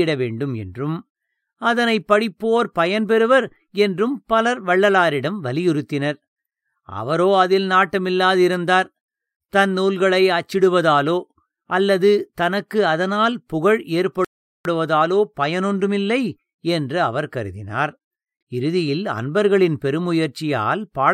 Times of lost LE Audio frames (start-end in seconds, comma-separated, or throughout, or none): none